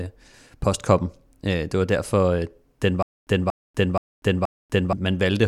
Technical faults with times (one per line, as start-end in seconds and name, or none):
3.02-4.93 stutter with silent gaps